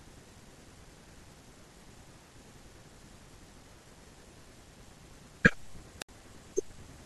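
A wireless microphone squelch dropout occurs at 5.99–6.09 s: the radio signal fades, hiss briefly rises, then the receiver's squelch mutes the output for 67 ms before speech returns.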